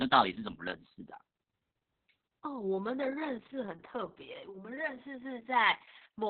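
From start to finish the speech carries Opus voice compression. Nothing above 4.4 kHz survives, and the coarse excitation sounds hoarse and faintly robotic, which fits SILK narrowband coding at roughly 6 kbps. That graininess separates it from a simple low-pass filter, which would only muffle.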